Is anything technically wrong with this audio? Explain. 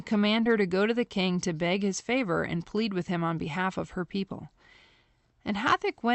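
Yes, one glitch. At about 0.43 to 0.47 s, just before "her to go to", there's a short concealed packet loss. A bit of audio arrived too late, so the receiver stretched the preceding sound to cover it, leaving a brief smear.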